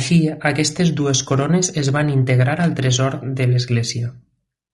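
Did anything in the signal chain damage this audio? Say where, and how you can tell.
Yes, at the codec stage: likely low-delay AAC compression, whose short frames blur pitch harmonics; throughout, the speech sounds rough and grainy, consistent with roughly 32 kbps.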